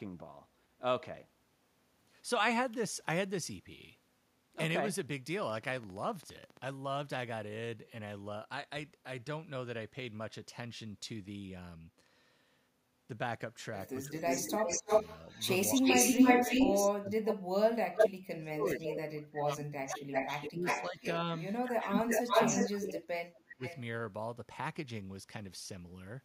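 Speech recording with three distinct faults. From 5.43 to 6.71 s a regular train of clicks, about 20 pulses at 15 per second, ticks over the audio with peaks roughly 5 dB above the signal, likely from interference from nearby equipment or an unstable interface. Speech is suppressed in double talk at 14.05–14.89 s (dips of up to about 15 dB), 15.76–15.87 s (about 10 dB), 16.96–17.78 s (about 30 dB) and 18.37–23.62 s (about 30 dB, roughly 3 s of the span affected). In these stretches the level drops and parts of the speech cut out, likely because an echo canceller could not separate the near talker from loudspeaker echo and attenuated both. An echo leak overlaps these stretches: a delayed copy of the speech comes back at 14.09–17.34 s (310 ms delay, about 5 dB above the speech), 17.95–18.10 s (324 ms, about 5 dB above), 18.64–18.90 s (328 ms, about 5 dB below) and 19.88–23.80 s (347 ms, about equal level). 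The cause is likely incomplete echo cancellation at a loudspeaker endpoint.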